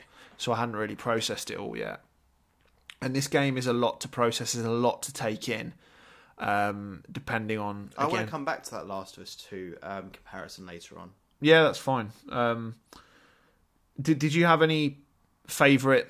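No technical faults can be heard anywhere in this speech recording. Nothing in the signal calls for a time, a value or an explanation of any mechanism.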